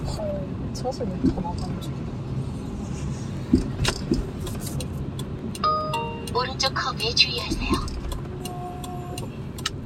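Overlapping chunks cause a stutter at 1.35, 3.37, 5.39, 7.41 and 9.43 s. Each 2-second chunk restarts early, so about 21 ms plays twice.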